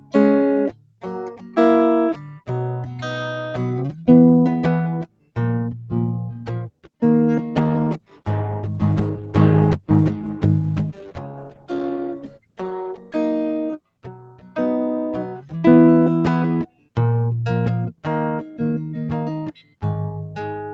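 Noise suppressor applied to music, throughout: a speech-tuned suppressor treats the music's sustained tones and tails as noise, so the level pumps and thins, swinging by around 15 dB. Sound cut by the noise suppressor, from 0.00 to 20.73 s: held notes and decays sink below the attacks, dipping by about 19 dB at the deepest point. Call bitrate drop, from 7.56 to 13.23 s: the estimated bandwidth fell, so Opus dropped from 40 to 13 kbps for about 5.6 s, and the music turns coarse and watery until the bitrate recovers.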